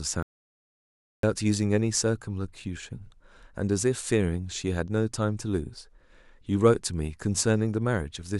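Right at the start, from about 0.23 s to 1.23 s, there's an audio dropout to silence: the speech cuts off and roughly a full second goes silent, with no room tone underneath, before the voice comes back mid-flow. The likely cause is the input briefly disappearing, maybe a device dropping out, a link failing or an accidental mute, while the recorder kept writing silence. Whatever was said in that second is simply gone.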